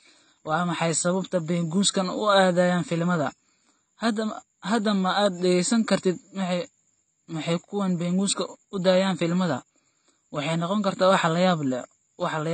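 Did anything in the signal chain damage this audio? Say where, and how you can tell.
Yes. The damage sits at the codec stage, most likely a low-bitrate AAC compression pass, with the sound fitting AAC-LC at roughly 24 kbps. The encoder had too few bits for the speech, so it discarded everything above 8.6 kHz and coarsely quantised what remained. Throughout the clip this is plainly audible: the top end is missing, leaving the speech dull, and sibilants and sustained sounds take on a smeared, warbling, fizzy texture.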